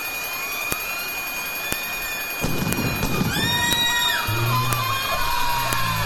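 Audio pieces about 1 s long were joined without stripping their WAV headers, so each piece's few dozen header bytes were played as if they were samples. This is a file header played as audio. Those bytes bear no relation to the surrounding waveform, so each junction produces a sharp, loud click or snap regardless of what the signal is doing. Clicks fall at 0.72, 1.73, 2.73, 3.73, 4.73 and 5.73 s, one per second, matching the 1 s piece length.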